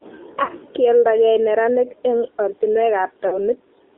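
Throughout, the speech passes through the AMR narrowband mobile codec. The band runs only from 300 Hz to 3.7 kHz. Damage is plainly audible, with a buzzy, synthetic quality that fits a low bitrate near 7.4 kbps.

From 0.44 to 0.50 s, lost AMR speech frames cause a brief dip and warble. The decoder repeats its last good settings at falling gain. The gap fits two missing 20 ms frames.

From 3.28 to 3.39 s, the same fault returns. The sound smears and sags, again fitting two lost frames. It then comes back rough.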